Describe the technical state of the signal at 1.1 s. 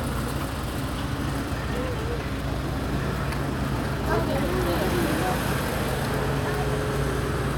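At 1.1 s the signal is intact, with no audible technical fault at that moment.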